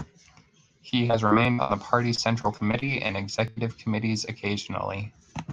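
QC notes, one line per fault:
0.89 to 1.71 s: repeated packet loss (robotic sound). Six gaps in under a second. Each hole is filled by stretching the last bit of sound, so the audio turns choppy. About 220 ms is missing, and about a quarter of this span is patched. The longest gap is 65 ms. The patches repeat held sound instead of real content, which gives the robotic buzz.
2.15 to 3.58 s: repeated packet loss (robotic sound). Nine gaps, about 260 ms missing in all, and 17% of the span is concealed. The longest hole is 104 ms. The fills are sparser than in the first run. Behind this, the audio carries Opus coding noise, and its top stops near 12 kHz.
1.45, 2.54 and 3.48 s: dropped buffer (overrun). Each point is a small jump forward in the sound. No silence is heard. Roughly 20 ms vanishes each time, and the two sides butt straight together. The likely cause is the capture side not reading samples before the hardware overwrote them. 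All three fall inside the packet-loss runs.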